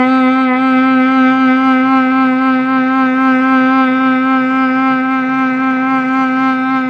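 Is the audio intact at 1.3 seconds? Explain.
No. At 1.3 s the music is affected by a wrong sample rate that runs through the whole clip. It plays at 0.667 times normal speed and about 7 semitones low, which fits 48 kHz material played back unconverted at 32 kHz. It sounds slowed and darkened.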